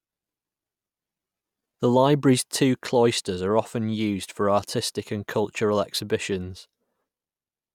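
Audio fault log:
Nothing stood out on listening to this speech recording.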